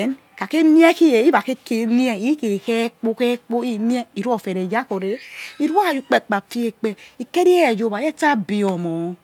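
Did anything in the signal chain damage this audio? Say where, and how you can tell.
No, nothing along the chain seems to have touched this speech recording; it all sounds as it should.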